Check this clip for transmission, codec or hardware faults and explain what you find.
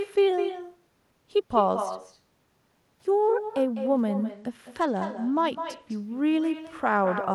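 Two faults are present, one running through the whole speech recording and one brief.

Echo with no canceller, throughout: the far end's loudspeaker feeds back into its microphone uncorrected, so every phrase returns about 9 dB quieter, roughly a fifth of a second later. A spectrogram shows faint delayed duplicates trailing each syllable.

Bluetooth SBC bit pool drop, 4.30 to 5.95 s: a congested link forced coarser encoding, consistent with the bit pool falling to 13, around 102 kbps. Treble dulls and gritty noise appears. A spectrogram shows the upper band vanishing, with grainy speckle below.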